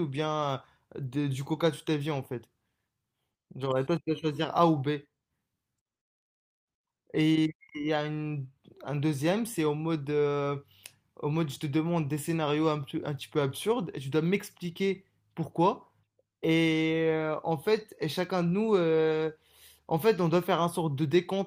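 No technical faults are audible.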